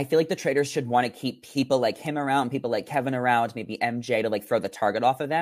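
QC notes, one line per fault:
No faults were heard in this speech clip. There is nothing to log for it.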